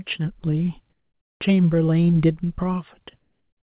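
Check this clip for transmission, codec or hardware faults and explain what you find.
Two pauses in the speech have their background replaced by comfort noise. From 0.9 to 1.4 s, and again from 3.2 s to the end at about 3.7 s, the faint room tone becomes a smooth, featureless hiss, about 4 dB and then about 2 dB quieter than the real background, which sits around 60 dB below the loudest speech. The likely cause is discontinuous transmission: the sender stops sending audio during silence, and the receiver fills the gap with synthetic noise of a similar spectrum. The call path's narrowband coding, with nothing above 4 kHz, is heard throughout.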